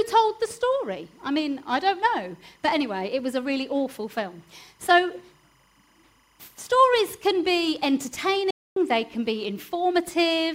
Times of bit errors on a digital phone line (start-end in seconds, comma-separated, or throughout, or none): none